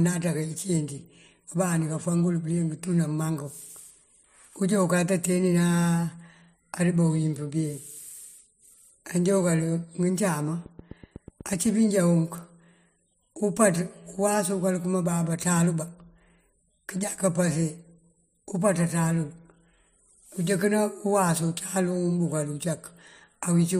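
From 10.66 s to 11.67 s a train of clicks runs over the speech: about ten sharp ticks at a steady eight per second, each peaking at roughly the same level as the speech itself. The clicks share one shape and evenly spaced timing, which points to a repeating external pulse, likely interference from nearby equipment or a faulty connection or power supply, rather than anything in the recorded sound.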